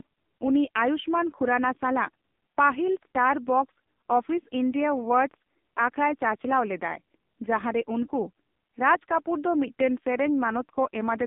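Throughout, the speech carries heavy AMR narrowband mobile codec damage: nothing above 3.7 kHz, a 200 Hz to 3.6 kHz line band, and a buzzy, synthetic voice that fits a low 5.9 kbps mode. Unlike plain low-pass filtering, the codec rebuilds the voice from pulses rather than merely dulling it.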